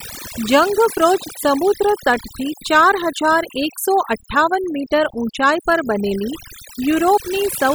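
Overdone noise removal runs through the whole speech clip. A noise reduction stage was set far too strong. It pushes individual frequency bands down, or shuts them off, whenever they sit close to its estimate of the noise. Quiet parts of the voice fall into that range and get removed too. Between phrases the background drops and breaks up into twinkling specks.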